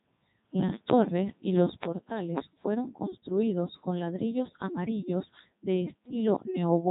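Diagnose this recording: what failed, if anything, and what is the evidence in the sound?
The failure is at the codec stage: a Codec 2 vocoder throughout the speech. The sound is robotic and buzzy from start to finish, with nothing above 3.8 kHz, which fits its 3.2 kbit/s mode. Only pitch, voicing, energy and envelope survive. The decoder rebuilds the voice from sine waves.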